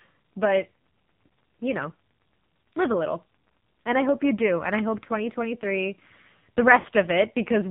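AMR narrowband mobile codec, throughout: the speech carries nothing above 4 kHz and sounds heavily buzzy and synthetic, which fits a low AMR-NB mode near 5.9 kbps. So few pulses per subframe leave the vocal-tract model coarsely excited and the voice thin.

Lost AMR speech frames, from 6.80 to 6.86 s: for about 40 ms, consistent with two lost 20 ms frames, the decoder repeats the last good pitch and vocal-tract settings at falling gain. The result is a short smeared dip before the voice resumes.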